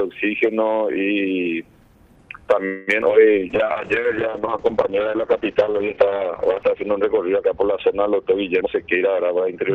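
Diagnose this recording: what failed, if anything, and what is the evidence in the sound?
The network stage stalled first: packets were likely held up in transit and the jitter buffer ran dry, producing a call audio freeze from 2.65 to 2.89 s. For about 220 ms the receiver extended the last sound, which fades rather than stopping dead, and then playback resumed where it left off. The result is a gap inserted into the timeline with nothing actually lost, adding roughly 220 ms of delay.

Right after that come two short concealed packet losses, at 3.01 to 3.04 s and at 3.08 to 3.11 s. About 40 ms and then 20 ms of audio never reached the decoder in time. The receiver patched each hole with only a few milliseconds of synthesised continuation before blending back. What you hear is a brief smear. The first loss also trims about 30 ms from the delay.

The jitter buffer then performs a slow-down from 3.40 to 4.01 s to rebuild its reserve. 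It repeats single pitch periods or slivers of pauses over and over, stretching the passage to about 95% speed at unchanged pitch and adding 37 ms. Sounds in that stretch are audibly drawn out.

At the codec stage a call bitrate drop begins at 3.52 s. The bandwidth estimate fell and the encoder was pushed from 32 kbps down to 7 kbps, stayed at the lowest rate for about 3.4 s, and had not recovered by the end of the clip. Audio bandwidth shrinks from 12 kHz to 6 kHz, so from 3.52 s onward the sound is coarser and duller, and it stays that way to the end.

Finally, the jitter buffer performs a speed-up from 8.60 to 9.70 s. It held more audio than its target, so it cut out short pieces of one or a few pitch periods repeatedly, removing roughly 200 ms. Playback runs at about 116% speed with the pitch unchanged, which is fast enough to sound clearly hurried.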